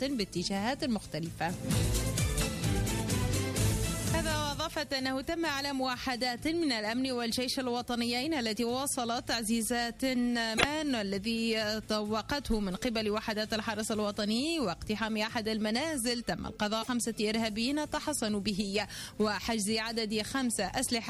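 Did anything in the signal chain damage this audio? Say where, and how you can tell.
Yes, there's damaged data in the compressed stream, so this is a codec issue. Short garbled blips land at 10.54 to 10.65 s and 16.81 to 16.89 s, where the decoder hit corrupted frames, lost sync and hunted for the next valid frame header.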